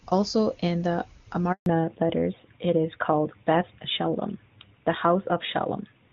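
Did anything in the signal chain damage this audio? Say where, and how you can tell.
Yes. The network stage caused a handover gap. Right after "in the", at 1.52 s, the voice dies away within a few tens of milliseconds. It stays silent for 140 ms, until 1.66 s. No frames arrived while the call moved between networks, so that stretch is simply lost.

The codec stage shows a fallback to narrowband from 1.66 s to the end. Before the gap, the HD Voice audio is clean and reaches well up. After it, nothing is present above 4 kHz, and the sound turns dull and rough. This fits a switch from AMR-WB at 23.85 kbit/s to AMR-NB at 12.2 kbit/s.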